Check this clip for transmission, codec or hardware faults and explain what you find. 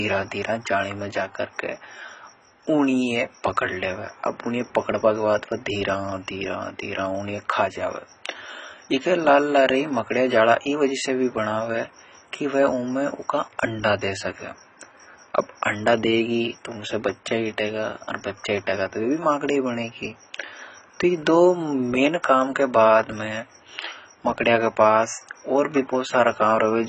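There's one fault, and it runs the whole way through: AAC compression. The speech has nothing above 9.2 kHz, so it sounds dull, and the damage is heavy, with a smeared, warbly, fizzy texture on sibilants and held vowels. That's likely AAC-LC starved of bits, which fits a bitrate around 16 kbps. With so few bits the encoder drops the top band and quantises the rest coarsely, leaving spectral holes that blur the detail.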